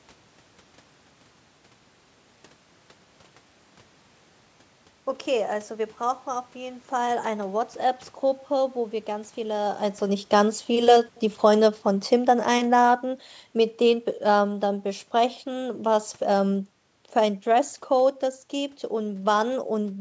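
From 10.14 s to 19.55 s the level slides steadily down by about 9 dB. This is automatic gain falling: the gain control judged the input too loud or its background noise too strong and kept easing its gain back, so the speech and the room noise beneath it sink together instead of the speech fading alone. A waveform shows the envelope tapering like a ramp. A spectrogram shows the whole band, which tops out at 8 kHz, dimming evenly, unlike the talker's own shift in position just before 10 s.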